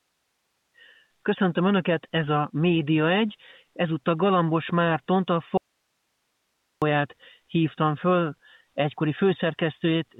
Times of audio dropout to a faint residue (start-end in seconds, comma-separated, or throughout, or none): 5.57-6.82